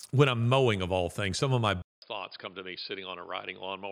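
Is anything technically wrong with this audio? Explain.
Yes. At 1.82 s the speech cuts out for about 200 ms. From there to the end it comes back duller and boxier, with nothing above 5 kHz, about 10 dB quieter, and over a faint new background noise. This is likely an input switched to a poorer device, where the recording jumped to a narrower-band microphone. A filter or codec change would only remove the top end, but here the level, the noise floor and the gap all change at the same moment.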